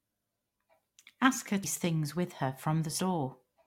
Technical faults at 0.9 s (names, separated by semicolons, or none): none